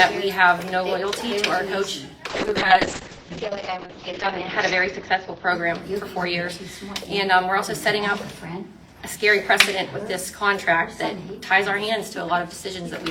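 From 2.3 s to about 7.07 s the audio suffers a call bitrate drop. The sound turns coarse and watery, and the top end collapses. The upper limit falls from about 20 kHz to about 8 kHz, so everything above that is simply gone. The worst stretch lasts close to 2 seconds. The cause is a falling bandwidth estimate that forced the encoder down to very few bits. The degradation fits a slide from around 96 kbps to roughly 7 kbps.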